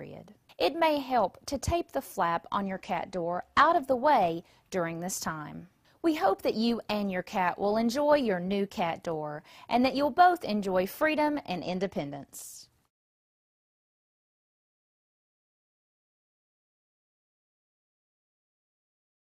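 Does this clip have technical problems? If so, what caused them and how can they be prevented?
Yes. Two Bluetooth SBC bit pool drops occur, from 2.64 to 3.83 s and from 11.63 to 15.12 s. In each the treble dulls and a gritty quantisation noise rises, which fits the bit pool falling from 31 to 14, around 99 kbps. The top sub-bands lose their bits and the rest are coarsely quantised. A plain low-pass or EQ change would dull the sound without adding grit. Unlike a codec switch, the full quality returns once the link recovers. Keeping the phone close with a clear path, and reducing 2.4 GHz congestion, prevents the drops.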